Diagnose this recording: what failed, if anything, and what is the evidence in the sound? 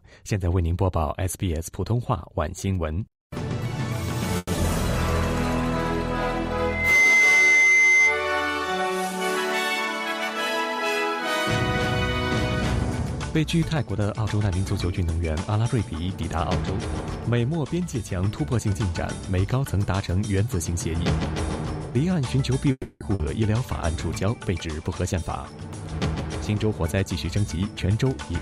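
At 4.37 to 4.50 s and again at 22.72 to 23.03 s the sound stalls: the last sound carries on as a fading buzz, then goes quiet for about 20 ms and 70 ms before resuming where it left off. This is a call audio freeze, most likely from delayed network packets that drained the jitter buffer. On a spectrogram it appears as a smeared, decaying band ending in a short blank strip.

At 4.56 to 4.59 s there is short concealed packet loss. About 40 ms of audio never arrived and was covered by roughly 10 ms of synthesized continuation, so the sound smears or wobbles briefly. On a waveform this is a short, oddly smooth patch that blends back into the real audio.

From 6.60 to 8.31 s a loudspeaker feedback squeal rises at 2.1 kHz. It builds over about a third of a second and peaks about 10 dB above the programme. An acoustic loop between speaker and microphone exceeded unity gain at that frequency. The spectrogram shows a single bright horizontal line that thickens as it grows.

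Within that stretch, 6.92 to 7.16 s runs at 86% speed as a jitter buffer slow-down. The receiver repeated pitch periods, adding 39 ms, so sounds drag while pitch stays unchanged. The waveform shows near-identical repeated cycles, and the spectrogram's harmonics stretch horizontally without bending.

Three jitter buffer speed-ups follow: 13.37 to 14.55 s at 109%, 24.87 to 25.23 s at 116%, and 26.49 to 27.57 s at 110%. They trim roughly 100 ms, 70 ms and 100 ms of pitch periods to shed buffered delay, so the audio sounds hurried at unchanged pitch. Spectrogram features compress in time while harmonic spacing holds.

At 23.15 to 23.22 s, just after the second freeze, playback skips ahead. Roughly 150 ms of audio is gone, bridged by about 50 ms of fill, because that stretch was dropped in transit or by an overflowing jitter buffer. The waveform shows an abrupt splice where the envelope jumps without a natural transition.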